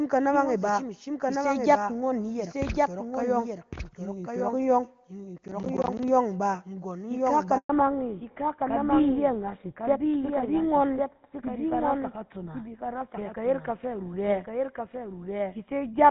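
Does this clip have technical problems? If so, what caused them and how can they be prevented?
Yes. The speech has four distinct problems.

Doubled audio track: throughout the clip, a second full-band copy of the speech trails the original by about a second and sits roughly 5 dB quieter. It has no decay or room colour, which separates it from an echo or reverberation tail. It most likely comes from the same signal being captured twice, once through a slower path, or from an edit that left two misaligned copies. To prevent it, route each source into the mix only once and check edits for stray duplicate regions.

Processor overload crackle: from 5.38 to 6.08 s a gritty tearing rides on the speech. It consists of many tiny hard-edged dropouts, about twenty in all, and each one fits an audio buffer of around 10 ms. Each buffer that wasn't finished in time was replaced by silence. It is a dense run of small gaps that stops when the load eases, which separates it from a single dropout or from clipping distortion. 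To prevent it, lighten the processing load or use larger buffers on the recording machine.

Handover gap: at 7.57 s the speech dies away quickly into 120 ms of silence and resumes at 7.69 s. The call was being switched between networks, and no speech frames arrived during the switch. Unlike the overload crackle, this is one clean hole rather than a gritty cluster. Whatever was spoken in that window is lost. To prevent it, record calls on a stable connection, where the phone has no reason to change networks mid-call.

Fallback to narrowband: from 7.69 s to the end, nothing above 4 kHz remains, and the speech sounds duller and rougher. Before this point it carries the fuller HD Voice band of AMR-WB at its top rate. The sound points to a drop onto the older GSM full-rate codec at around 13 kbit/s. Unlike a simple low-pass filter, the band loss arrives together with the handover and adds codec roughness. 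To prevent it, keep both ends on networks that support HD Voice throughout the call.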